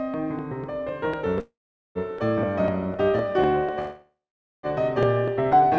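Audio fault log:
0.14–5.78 s: periodic USB or driver dropouts. A sliver of music is skipped every 0.25 s, giving evenly spaced ticks from a bus or driver stalling repeatedly.
1.40–1.98 s and 3.79–4.66 s: call audio freeze. Music decays into a fading buzz, then silence, and resumes where it stopped, likely from an emptied jitter buffer.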